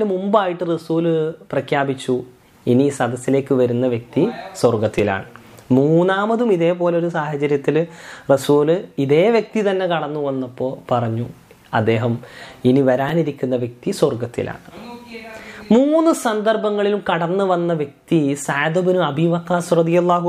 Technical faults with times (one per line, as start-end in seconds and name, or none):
4.99 repeated buffer
13.09 repeated buffer